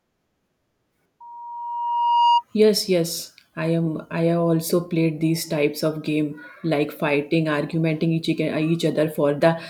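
The microphone was picking up its own loudspeaker, and the loop gain passed one at 946 Hz. Loudspeaker feedback squeal results from 1.20 to 2.44 s: a tone swelling over about a second to roughly 5 dB above the speech.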